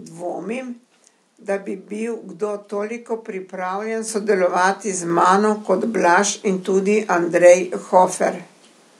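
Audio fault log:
4.08 s and 5.10 s, microphone volume stepped up: the call software judged the microphone too quiet and raised its input volume in single jumps, about 8 dB after "bil kdo toliko pripravljen", then about 4 dB before "mano kot", lifting voice and background level together.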